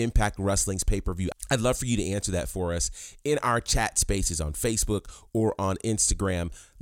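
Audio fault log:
The speech signal stays steady throughout, with no audible technical faults.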